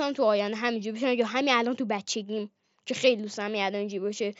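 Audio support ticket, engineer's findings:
No faults found in speech.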